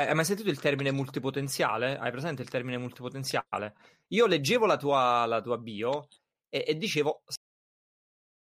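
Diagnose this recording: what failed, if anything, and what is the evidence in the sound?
The failure is a cut-off end at the buffer or storage stage. Right after "bio e e dicevo", the speech stops dead at 7.36 s in the middle of a sound and falls into digital silence for the remaining 1.1 s. The final buffers of audio were never written out, so nothing decays. On the waveform, the signal ends in a vertical edge and becomes a flat line. On the spectrogram, every frequency band ends in the same sharp vertical boundary, followed by empty black.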